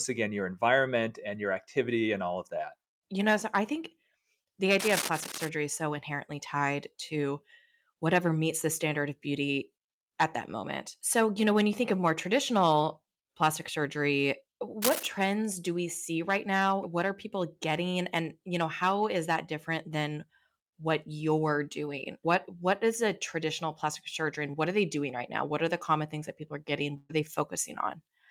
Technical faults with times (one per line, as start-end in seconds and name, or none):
4.79-5.49 cable scratch noise
14.82-15.07 cable scratch noise
24.51-24.55 short concealed packet loss
26.97-27.11 burst of packet loss